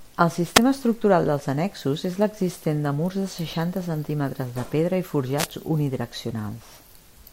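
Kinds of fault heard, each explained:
Wireless microphone noise hit: at 0.55–0.59 s, just before "estructural dels annexos és", and at 5.37–5.47 s, after "centímetres de pedra i", the FM radio link fades as reflections cancel, so receiver noise surges into a brief swish of static over the speech.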